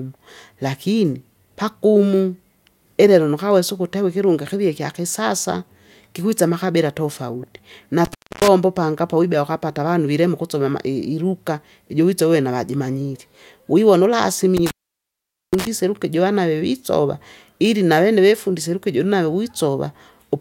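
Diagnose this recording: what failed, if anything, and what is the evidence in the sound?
The fault is an intermittent contact in the analogue wiring, a loose cable or plug. The speech cuts out from 8.05 to 8.48 s, with the line open for about 0.28 s, and again from 14.57 to 15.67 s, open for about 0.82 s. Each break opens and closes with crackle as the contact scrapes, and faint hiss continues through the gap. That rules out a network or buffer dropout, which switches cleanly to digital silence with no crackle at the edges.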